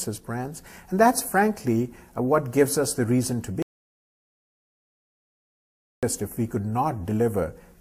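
The sound cuts off abruptly at 3.62 s and returns mid-flow at 6.03 s, leaving about 2.4 s of dead silence with no room tone. This audio dropout to silence likely comes from the input being lost while the recorder kept writing silence.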